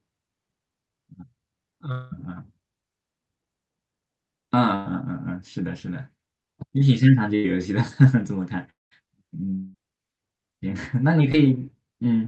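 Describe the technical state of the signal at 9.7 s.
At 9.7 s the signal sits inside a gap running from 9.55 to 9.76 s, most likely a long network dropout. For about 0.2 s no fresh speech arrives; the receiver stretches the last sound into a buzzy, fading continuation for nearly the whole span, with no true silence, and then the speech resumes without the lost part. A short packet-loss glitch would be a brief click, and a mute would drop straight to silence rather than leave this smeared tail.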